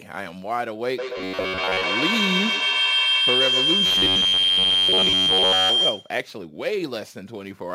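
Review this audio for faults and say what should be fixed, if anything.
A feedback howl runs from 0.98 s to 6.3 s. Sound from a loudspeaker re-enters a microphone in the same room on each pass around the loop, gaining level until a tone near 3 kHz dominates and peaks about 5 dB above the speech. It pulses roughly every 150 ms, the loop's round-trip delay. On a spectrogram it is a bright horizontal band near 3 kHz that thickens over time, and the waveform envelope swells in regular beats. Muting one of the co-located devices or using headphones would break the loop.

A robotic, metallic buzz affects the speech from 1.18 s to 1.84 s and from 3.86 s to 5.70 s, with a fixed rate of 93.8 Hz. The likely cause is that audio arrived too seldom and the playback filled the gaps by looping the most recent chunk, about 10.7 ms long, replacing most of the real signal in those stretches. A spectrogram shows evenly spaced harmonic lines at multiples of about 94 Hz, and the waveform shows the same short segment repeating. 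A larger jitter buffer and a steadier network path would stop these gaps.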